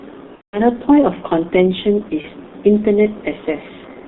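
From the very start, the whole clip of speech goes through the G.723.1 codec, and it's pretty heavy-handed. The band sits roughly between 150 Hz and 3.7 kHz, so there's no air or sparkle up top, and the thinness and grit fit a rate of around 6.3 kbit/s. Because the codec redraws its model of the voice only every 30 ms or so, consonants smear together and the voice comes across muffled and a bit hoarse.

At 0.35 s there's VoIP packet loss concealed by the speech codec, running to about 0.60 s. That gap is around 180 ms, which points to six consecutive 30 ms frames going missing. The decoder keeps guessing from the last pitch and filter it had and turns the level down step by step, so you hear a stretched, fading buzzy tone or coloured noise instead of real speech, muted from the third lost frame on. A second, much shorter dropout hits from 2.21 to 2.25 s, about one frame's worth. It's a quick smeared blip, and the voice sounds weak or distorted for a moment afterward while the decoder recovers.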